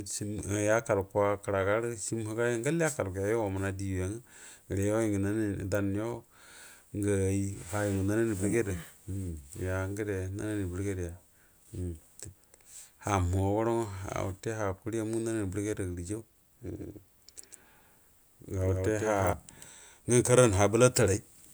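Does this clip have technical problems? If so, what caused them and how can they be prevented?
Yes. From 16.77 to 19.33 s the speech carries a doubled audio track: a dry full-band copy, about 5 dB quieter, trails by roughly 150 ms, likely from a second capture path. On a waveform or spectrogram it appears as every burst repeated and offset, beginning and ending abruptly. Prevent it by routing each source through only one capture path and checking edits for overlapping copies.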